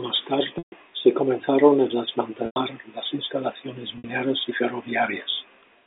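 At 0.58 to 0.72 s, 2.46 to 2.56 s and 3.98 to 4.04 s the speech breaks with packet loss with pitch repetition, gaps of 140, 100 and 60 ms. The receiver loops the last pitch period, so each gap starts as a held, buzzy tone that fades out rather than a hard silent dropout. The longest fades to silence before speech returns. All three events fit 20 ms packets, over a band-limited telephone line.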